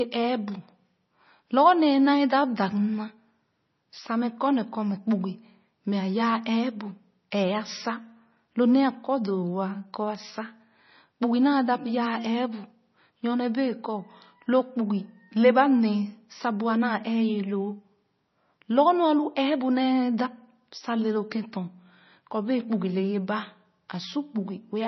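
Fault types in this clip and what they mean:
MP3 compression, throughout the clip: the speech has nothing above 6 kHz and a heavy watery, swirling texture, which points to a likely low-bitrate MP3 encode, around 24 kbps. Short of bits, the encoder cut the treble at a fixed frequency and zeroed weak frequency lines, which then switch on and off from frame to frame. That flicker gives the smeared, underwater quality and blunts consonant attacks.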